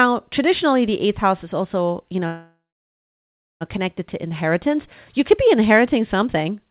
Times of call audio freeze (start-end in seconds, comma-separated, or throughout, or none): 2.26-3.63